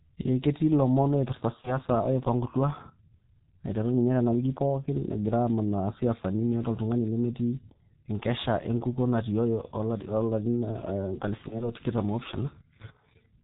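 From start to finish the speech carries G.723.1 codec damage: muffled, hoarse, nothing above 4 kHz, and smeared consonants. That points to a low-rate codec around 6.3 kbit/s.

At 1.61 to 1.78 s and again at 11.48 to 11.69 s there's VoIP packet loss concealed by the speech codec. Each sounds like a single lost 30 ms frame patched by extrapolation, so the sound is stretched into a buzzy tone or coloured noise that fades, then stays weak briefly as the decoder recovers.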